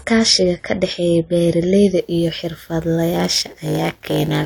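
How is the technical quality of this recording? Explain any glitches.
The recording has two clear technical problems, one at the start and one at the end of this speech clip.

From 0.0 to 2.0 s the adaptive stream is starting at a low bitrate. The treble is missing or synthetic and codec artefacts are stronger, consistent with about 32 kbit/s AAC, until the player jumps to a cleaner rendition, plausibly near 96 kbit/s. Unlike a fixed band-limit, quality improves abruptly without any gap.

From 3.13 s to the end there is a padded block size mismatch. Each block read downstream is partly zero-filled, producing a steady 100 Hz buzz and stretching playback to 0.919 times normal speed. Unlike tape or clock slowdown, the pitch stays about normal, and the buzz is periodic rather than random dropouts.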